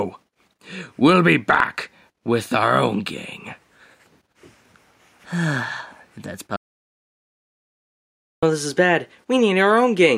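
An audio dropout to silence runs from 6.56 to 8.43 s: the input likely disconnected, leaving about 1.9 s of silence, with no room tone and the sound cut mid-flow.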